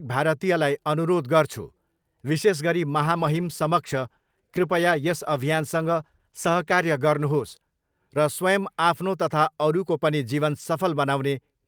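From 3.02 to 8.35 s the speech turns rough and muffled, a call bitrate drop that fits encoding falling from about 64 to 19 kbps.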